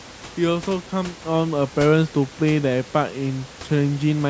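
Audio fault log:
No fault to log.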